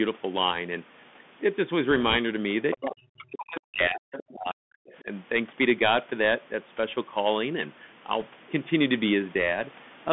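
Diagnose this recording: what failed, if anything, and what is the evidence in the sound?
Throughout, the speech is narrow and gritty, with a granular hiss, scratchy s sounds and nothing above about 3.5 kHz. This is the Bluetooth CVSD headset codec at 64 kbit/s: a one-bit up/down delta coder whose adaptive step cannot keep pace with loud, bright sounds.

From 1.91 to 2.17 s, and again from 8.20 to 8.23 s, a rushing crackle rides over the speech without sharp clicks. These are bit errors on the Bluetooth voice link, at around 1 percent. Each flipped CVSD bit nudges the waveform only slightly and decays, so the damage smears into noise.

A faint second voice surfaces at 2.71 to 2.85 s and 4.12 to 4.32 s, about 15 dB below the talker, and briefly at 4.89 to 4.94 s, about 30 dB down. This is the other side's voice leaking through, likely because the echo canceller left residue of the far end's loudspeaker playback in the microphone.

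The talker drops out heavily from 2.75 to 4.12 s and from 4.33 to 4.86 s, with the deepest cuts near 40 dB, and dips by about 10 dB at 5.02 to 5.07 s. This is speech suppressed in double talk. With both sides active, the echo canceller likely attenuated everything rather than risk passing echo. The call microphone processing's normal low-bass high-pass is also present.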